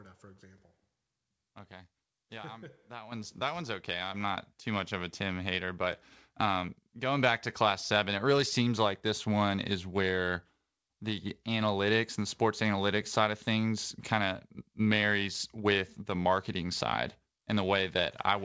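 At 3.12 s the speech and the room noise behind it jump louder together by about 9 dB, just before "that one's okay", and at 4.14 s, between "that one's okay" and "not too much of", they rise again by about 4 dB. These are microphone volume steps: the call software raised the input gain at once rather than gradually. The call path's band-limited sound, with nothing above 8 kHz, fits G.722.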